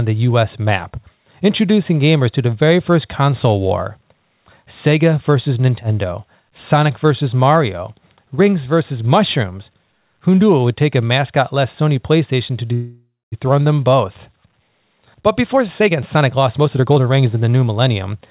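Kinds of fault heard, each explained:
Call audio freeze: From 12.74 to 13.34 s the last sound is held on as a fading buzz or hiss that decays into about 220 ms of silence, filling roughly 0.58 s in total. The audio then resumes exactly where it stopped, so nothing is skipped and everything after arrives 0.58 s later. The likely cause is delayed packets draining the jitter buffer. Unlike packet loss, which drops sound, this only inserts a pause.
Jitter buffer speed-up: From 15.44 to 18.22 s the speech runs at about 120% speed while its pitch stays the same. The receiver trims short pitch-period-sized slices again and again, removing roughly half a second. The result sounds hurried rather than chipmunk-like. That unchanged pitch separates it from a playback-rate or resampling error, where faster audio would also sound higher.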